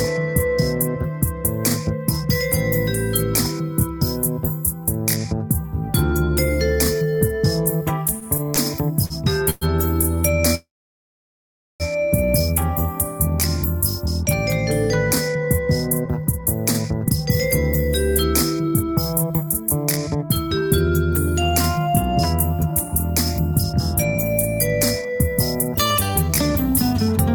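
Packets repeatedly arrived late between 8.19 and 9.65 s, so the jitter buffer kept running dry and the receiver stretched the last sound across five short gaps (220 ms in total, the longest 114 ms): repeated stalls (stutter) that make the audio drag and catch without losing anything. From 10.55 to 11.83 s the audio halts for 1.25 s, of which 1.15 s is silence, and then resumes where it stopped. This is a call audio freeze, likely from packets held up in transit until the buffer emptied. The gap pushes everything after it about 1.25 s later. Afterwards the receiver, holding more buffered audio than it wanted, trimmed small pitch-period slices to catch up in four jitter buffer speed-up passages: 15.29–17.21 s at 109%, 18.63–20.62 s at 111%, 21.52–24.16 s at 107% and 25.01–27.09 s at 110%. Each drops roughly a fifth of a second, so these stretches sound hurried while the pitch stays the same.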